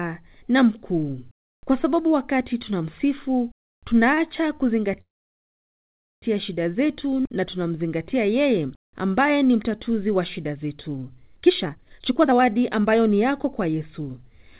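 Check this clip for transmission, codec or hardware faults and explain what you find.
Three network-side problems show up in this speech clip, all timing faults rather than damage to the sound itself. The band-limited tone, with nothing above 4 kHz, fits a narrowband codec like G.711 mu-law.

Short stall from a late packet, 4.14 to 4.19 s. A packet didn't turn up on time and the jitter buffer ran dry, so the receiver stretched the last bit of sound by about 29 ms until the packet arrived. Playback then resumed right where it left off, so nothing is lost. You just hear a sound held a touch too long.

Call audio freeze, 5.01 to 6.24 s, just before "shida zetu na tunamzingatia". The sound stops, trails off briefly, and then goes silent for about 1.17 s before carrying on seamlessly. Nothing is skipped; a gap of roughly 1.2 s has simply been inserted. The likely cause is packets held up in transit, which left the jitter buffer empty while the receiver filled the wait with a fading continuation and then silence.

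Jitter buffer speed-up, 11.41 to 14.53 s, starting right after "mtatuzi wa shida zetu". The buffer was holding more audio than it aims for, so the receiver trimmed it by cutting tiny pitch-period-sized slices over and over, around 0.7 s in total. The speech plays at about 125% speed but keeps the same pitch, so it sounds rushed rather than chipmunky.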